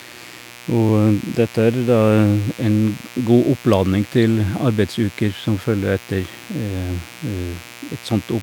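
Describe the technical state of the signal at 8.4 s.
At 8.4 s, mains buzz at 60 Hz runs through the speech, as throughout, roughly 20 dB down; switching spikes add raspy harmonics into the kilohertz range, unlike smooth low hum.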